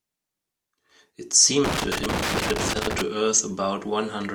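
A speech recording in which loose connector crackle breaks in from 1.64 to 3.01 s: a worn or dirty contact making and breaking chops the signal into irregular scratchy bursts. Unlike steady, evenly scattered surface noise, it arrives in clustered bursts, then stops.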